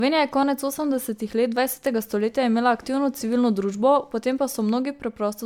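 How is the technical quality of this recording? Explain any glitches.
The quality is compromised by generation loss, present from start to finish. The speech sounds swirly and hollow, with a watery smearing in the upper frequencies and softened consonant attacks, and nothing is present above 19.9 kHz. That is more degradation than a single encode at this quality would leave. The likely cause is repeated MP3 encoding, around seven passes at a setting that fits 128 kbit/s, each requantising on a shifted frame grid so that noise and spectral gaps accumulate.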